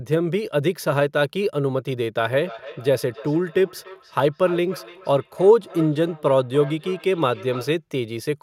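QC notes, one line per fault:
2.31–7.8 s, feedback echo between two devices: speech returns thinner and ringing roughly every third of a second, about 17 dB down, as a nearby device replays the call into this mic.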